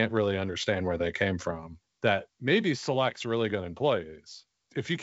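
No technical faults can be heard in this speech recording. The G.722 wideband telephone coding shows only as a band limit near 7.7 kHz, with at most a faint trace of coding noise.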